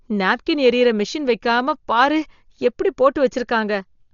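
Throughout, the speech sounds dull, with nothing above 6.9 kHz and rough, fluttering noise around tones. Likely heavy Dolby Digital compression, near 40 kbps.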